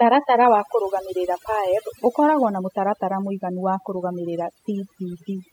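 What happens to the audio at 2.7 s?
At 2.7 s the speech is still caught in the overdone noise removal that runs through the whole clip. The denoiser was pushed too hard, shutting down frequency bands it took for noise, so the background sits near silent with twinkly specks and quiet parts of the voice are cut away with it.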